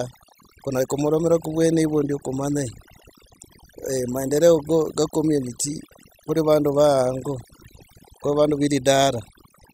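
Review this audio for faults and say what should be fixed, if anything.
The whole clip suffers from overdone noise removal. The noise reduction was pushed too hard, so any frequency band sitting near its noise estimate gets pulled way down or switched off, and the quieter bits of the speech get thrown out along with the noise. That's why the gaps sound almost dead but sprinkled with little twinkly specks. Next time, back off the reduction amount and check the result by ear before committing.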